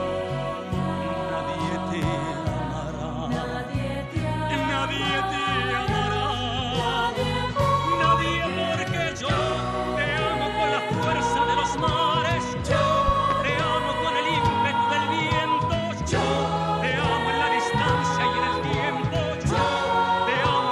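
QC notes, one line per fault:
2.02–2.05 s, loud pop: a single sharp pop about 10 dB above the sound, likely a voltage spike from a plug, switch or static, with the audio carrying on underneath.
13.08–13.34 s, loud pop: two pops in quick succession, about 15 dB above the sound, likely a driver glitch or switching transient, shaped by the downstream circuitry.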